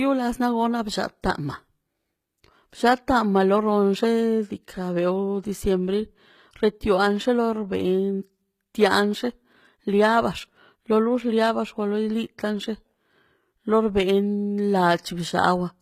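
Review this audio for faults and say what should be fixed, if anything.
Throughout the speech, sibilants sound gritty and metallic and the treble stops at about 14.9 kHz. This is likely HE-AAC compression: the upper band is synthesised from copied lower harmonics rather than coded, consistent with a very low bitrate around 20 kbps. To prevent it, encode at a higher bitrate or with plain AAC.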